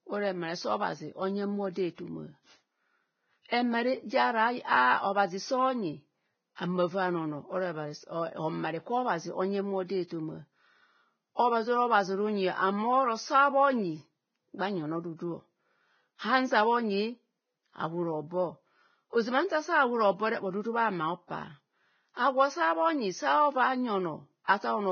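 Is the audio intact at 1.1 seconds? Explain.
No, at 1.1 seconds the speech carries the same damage it has all the way through, which sounds like heavy Vorbis compression, likely at a low bitrate of around 17 kbps. Nothing sits above about 6.6 kHz, and the remaining treble is quantised so coarsely that it comes out hissy and grainy, with smeared consonant attacks.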